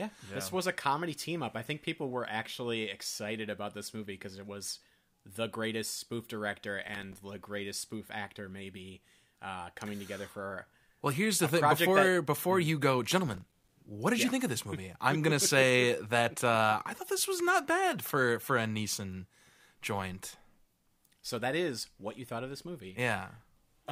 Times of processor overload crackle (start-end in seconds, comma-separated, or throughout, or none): 6.88-7.18, 13.27-13.69